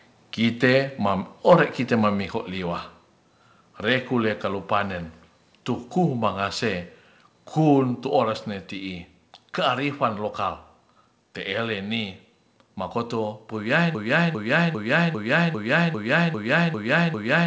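A speech clip carried over a call link that tops out near 8 kHz, which fits G.722 at 64 kbps. From 1.50 to 1.54 s the loudest peak turns harsh and crackly. This is microphone overload. The signal was likely driven about 4 dB past the converter's limit, so a small share of samples had their tops sheared flat. At 2.22 s voice and background drop together by about 3 dB. This is a microphone volume step-down. The likely cause is the call software cutting input gain in one move after that distorted peak. From 13.95 s to the end a broken-record loop takes over. A fragment of about 0.40 s repeats back to back, nine times. The stream likely stalled and kept resending its last buffer, so the audio meant for those seconds is lost.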